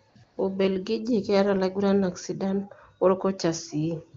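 The phone's voice activity detection judged the talker silent and stopped sending speech frames. Twice the receiver substituted AMR comfort noise, from 0.09 to 0.15 s and from 0.23 to 0.37 s. The real background drops out and smooth synthetic hiss switches in, then back out.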